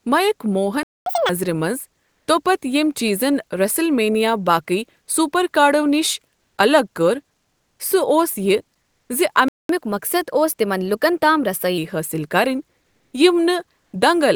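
At 0.83 s the speech cuts to silence for 0.23 s, a playback stall that likely comes from the player running out of buffered data or its thread being blocked. When the sound resumes at 1.06 s, it rushes forward at double speed until 1.29 s, pitch jumping about 10 semitones, as the player resamples its backlog to catch up at higher speed.

At 2.05 s, 6.37 s (just after "باقی سپر کارڈو نِش"), 7.39 s, 12.81 s and 13.81 s, the quiet background, already about 50 to 54 dB below the loudest speech, turns flat and featureless for 0.12 to 0.4 s, shifting level by 0 to roughly 3 dB. This is comfort noise in place of the background, likely from discontinuous transmission consistent with Opus DTX, which substitutes synthetic noise during pauses.

A second stall follows "یہِ زِ" at 9.48 s, about 0.21 s of silence, again likely from a starved or blocked player. From 9.69 s to 11.78 s the catch-up is gentler, at 1.1× speed with pitch raised about one and a half semitones, before settling back.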